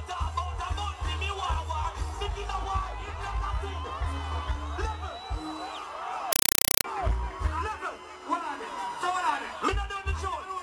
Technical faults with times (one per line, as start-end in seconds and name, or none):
6.33-6.84 compressed stream played as audio